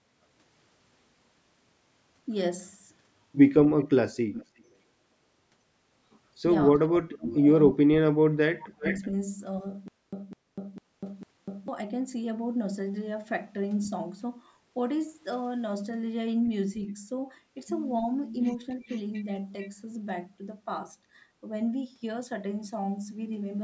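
From 3.78 to 4.63 s an echo leak is heard. A faint copy of the speech returns about 352 ms late, roughly 20 dB below it. The likely cause is a far-end loudspeaker whose echo canceller let some of its microphone pickup back into the call. Right after, from 4.62 to 4.69 s, the speech dips by about 20 dB for some 70 ms. This is likely speech suppressed in double talk. The canceller could not separate the talker from the echo, so it pulled both down.

From 6.78 to 8.84 s the same suppression returns, far deeper. The speech drops by up to about 40 dB and is affected for around 1.5 s in total. Inside that stretch, from 7.23 to 7.39 s, the echo leaks again, about 371 ms late and roughly 20 dB down. From 8.63 to 9.07 s it is stronger, about 380 ms late and only some 10 dB below the speech.

From 18.87 to 18.98 s a last scrap of echo arrives about 441 ms late. It is roughly 30 dB down. The delay drifts from 352 to 441 ms across the clip.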